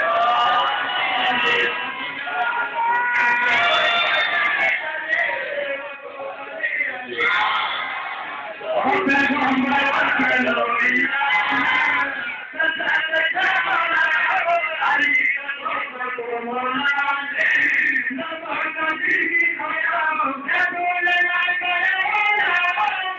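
No technical faults are audible.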